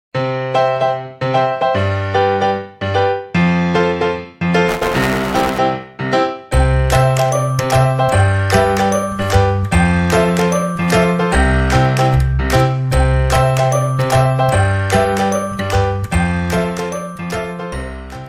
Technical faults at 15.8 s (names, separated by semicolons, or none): none